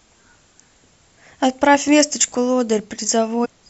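Damaged data in a compressed stream at 3.44 to 3.46 s: corrupted bytes throw the decoder out of sync, producing a brief glitch in the speech.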